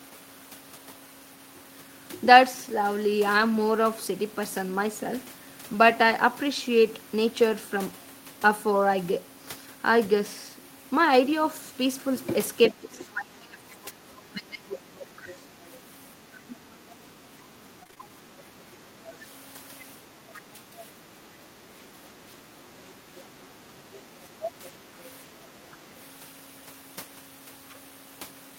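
At 3.37 to 3.43 s, 6.11 s and 7.51 to 7.53 s the speech turns briefly rough and noisy with no gap: a lost packet rebuilt from error correction. Each missing packet was replaced by the low-bitrate copy carried in the next one.

From 12.71 to 15.28 s the voice sinks in pieces, by about 25 dB at its deepest. This is likely speech suppressed in double talk: with both sides talking, the echo canceller could not tell the talker from the loudspeaker echo and lowered both. Shallower dips of about 10 dB follow at 16.47 to 19.05 s, 20.33 to 22.48 s and 23.54 to 25.94 s.

A faint second voice, about 25 to 35 dB below the speech, slips in at 15.30 to 15.72 s, 18.40 to 19.16 s, 22.93 to 23.21 s and 24.65 to 25.04 s. This is likely the other side's voice leaking through, which the echo canceller left in the microphone signal.

Between 17.83 and 18.10 s the sound goes choppy with pieces missing. This is repeated packet loss (robotic sound): five holes in quick succession, each patched by stretching the last sound, covering about 44% of that stretch.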